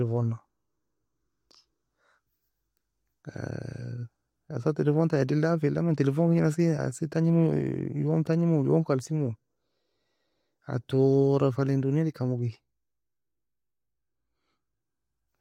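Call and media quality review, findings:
Nothing stood out on listening to the speech in this recording.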